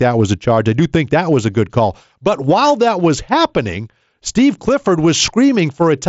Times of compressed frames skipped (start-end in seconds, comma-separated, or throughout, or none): none